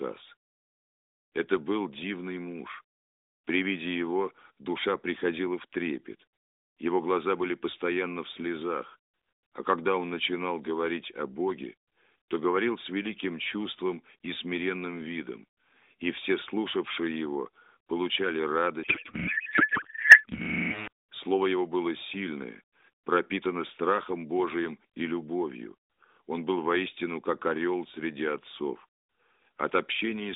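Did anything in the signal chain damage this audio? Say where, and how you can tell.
Yes. A codec payload misread at the codec/packetisation stage affects 18.84 to 20.88 s, starting just after "все слушавшие его получали". The speech there gives way to garbled noise and warble that barely tracks it. This is the sound of an AMR decoder finding frame fields in the wrong bit positions. It fits octet-aligned frames being unpacked as bandwidth-efficient ones. The narrowband AMR path, band-limited to roughly 200 Hz to 3.7 kHz, recovers once the packing matches again.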